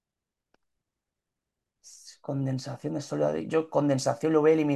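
No technical faults can be heard anywhere in this speech.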